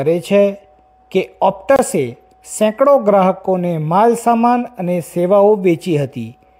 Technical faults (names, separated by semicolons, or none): gap at a join of encoded pieces